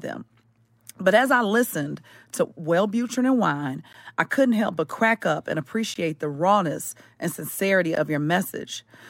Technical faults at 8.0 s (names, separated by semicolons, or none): gap between stream segments